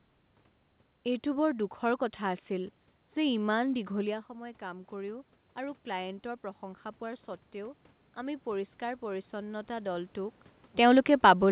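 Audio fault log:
4.06–10.44 s automatic gain rising: after "কথা আছিল যে ইমান" the input drops about 12 dB, and the gain control climbs about 9 dB, swelling voice and room noise together.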